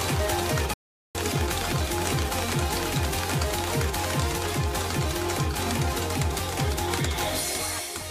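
At 0.74 s the sound halts abruptly and stays silent until 1.15 s, a gap of about 411 ms, before it resumes. This is a playback stall, likely caused by the player running short of data or its output thread being blocked, so nothing reached the output until it recovered. Its length sets it apart from a dropout, which is a momentary gap lasting a few milliseconds and heard as a tick rather than a full pause.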